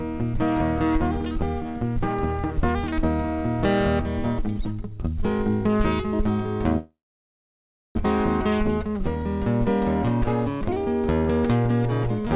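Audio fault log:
6.78–7.97 s, call audio freeze: the sound smears into a fading buzz, then flat-line silence, likely an emptied jitter buffer; playback resumes where it stopped, nothing lost.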